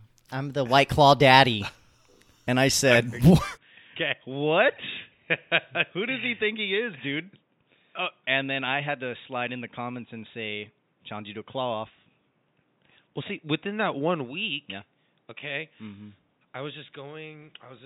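From 3.57 s to the end, the speech turns abruptly dull and boxy with no gap, dropping about 10 dB in level, losing everything above 3.8 kHz and gaining a faint new noise floor. This is likely an input switched to a poorer device.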